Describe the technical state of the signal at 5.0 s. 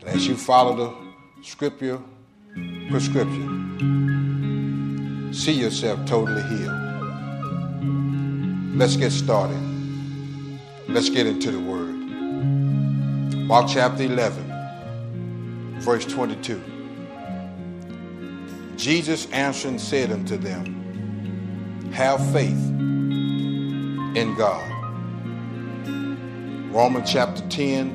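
At 5.0 s the signal is intact, with no dropout, distortion, glitch or other audible fault at that point.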